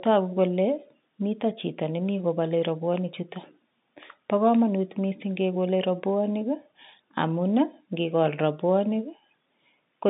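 No technical faults are audible.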